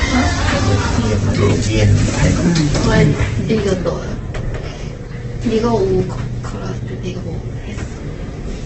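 Throughout, everything is grainy and rough, with nothing above 8.2 kHz, likely heavy Opus compression at a very low bitrate, since it turns noisy rather than swirling like MP3.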